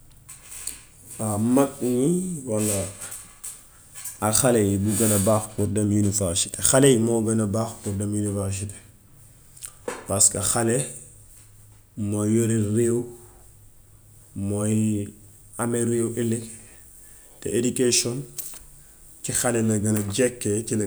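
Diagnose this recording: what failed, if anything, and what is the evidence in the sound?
Nothing in the recording stood out as a fault on listening, so there is no failed stage to point to.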